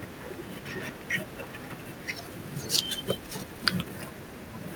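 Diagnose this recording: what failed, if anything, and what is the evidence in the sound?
Nothing failed: no stage in the chain leaves an audible mark anywhere in the speech, so there is no fault to trace.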